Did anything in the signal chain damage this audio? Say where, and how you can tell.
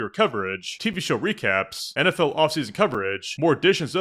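Yes. At playback, a gap between stream segments cuts hard-edged silent holes into the speech at 0.93 s and 2.94 s, 2.0 s apart, lasting 7.3 ms and 4.8 ms. Adjacent segment timestamps leave small gaps that the player fills with silence. No audio is lost.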